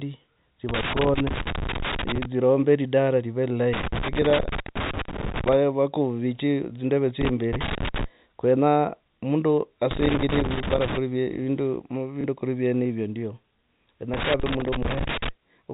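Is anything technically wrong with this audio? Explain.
Yes, the audio has two faults, heard over a telephone-band signal with nothing above 4 kHz, as G.711 coding gives.

Loose connector crackle occurs from 0.69 to 2.25 s, 3.73 to 5.53 s, 7.21 to 8.04 s (ending just before "kwenyaa mundu"), 9.91 to 10.97 s (just after "kwenyaa mundu"), and 14.14 to 15.29 s. A worn contact makes and breaks, chopping the signal into irregular bursts of scratchy crackle.

Packet loss with last packet repeated occurs at 7.68 s and at 12.21 s (just before "kuri vyenevyo"). Each gap lasts 30 ms, which fits one lost packet. The receiver replays the previous packet until new ones arrive, so each gap is heard as a small blip.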